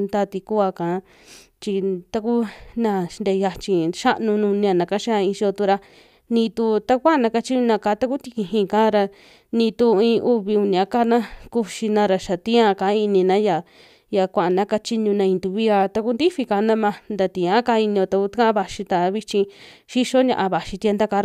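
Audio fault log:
The speech signal holds steady throughout, with nothing heard that departs from normal recording and playback.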